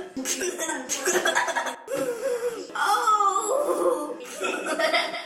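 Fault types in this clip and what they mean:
One channel drops out: from 0.42 to 0.69 s the sound abruptly falls about 6 dB, likely because one stereo side went missing before the mono sum.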